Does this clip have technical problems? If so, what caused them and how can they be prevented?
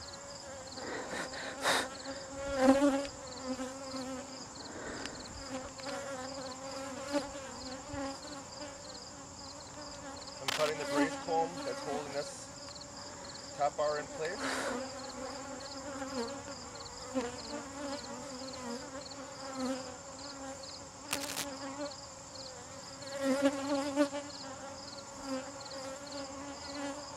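Yes. Two brief bursts of cable scratch noise, a rough crackling and rustling, sit over the sound from 10.48 to 10.70 s, a little louder than the audio, and from 21.11 to 21.45 s, at about the same level. The likely cause is a worn cable, connector or control being moved, so its contact resistance jumps erratically. Cleaning or replacing worn leads and connectors, and securing cables so they cannot shift during recording, prevents this.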